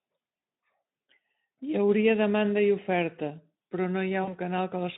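A speech clip carried over a narrowband Speex line (roughly 150 Hz to 3.7 kHz, with light codec roughness) suffers VoIP packet loss concealed by the speech codec at 4.23 s, just after "demanda i oferta però". About 40 ms of audio went missing, which fits two lost 20 ms frames. The decoder filled the gap by repeating its last pitch and spectral shape at falling gain. The result is a brief buzzy, smeared stretch that fades, and the voice stays weakened until about 4.38 s while the decoder's state recovers.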